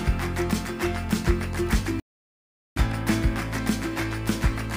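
At 2.00 s the audio drops into a rebuffering stall: playback consumed everything that had been downloaded and halted until more data arrived, holding silence until 2.77 s. The sound then picks up precisely where it broke off, so nothing is skipped, but about 0.77 s of dead air is inserted. On a waveform this shows as a flat line splicing two continuous stretches; a spectrogram shows a clean, empty vertical gap.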